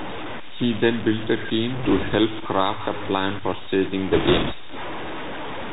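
From the start, the speech carries a grainy distortion that tracks its level, with noise only about 10 dB below it, likely low bit depth without dither, around 5 bits, truncated. The waveform shows visible staircase steps. Throughout, the Bluetooth CVSD headset codec leaves nothing above 4 kHz on a spectrogram, with scratchy s sounds and granular hiss, which fits a 64 kbit/s link. From 1.75 to 2.16 s, between "then built a" and "craft a plan for", bit errors on the Bluetooth voice link add a rushing crackle, seen as broadband speckle. After "a plan for staging", from 4.11 to 4.53 s, a heavier burst at roughly 7% errors sounds rougher and denser.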